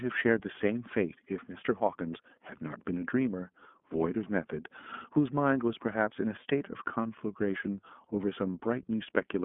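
Throughout the speech, the iLBC codec is plainly audible. Nothing sounds above about 3.7 kHz, and the band sits near 200 Hz to 3.5 kHz. Each frame is coded on its own, which fits 30 ms frames at 13.33 kbps. The result sounds rough and synthetic.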